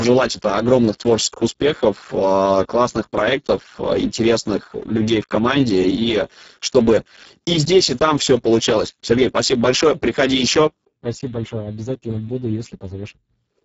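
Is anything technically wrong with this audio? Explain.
Yes. Heavy Speex codec damage runs through the whole speech clip. The sound fits a very low setting, around 6 kbps. Too few bits go to the excitation, so the speech turns hoarse and noisy. Nothing is heard above 7.7 kHz.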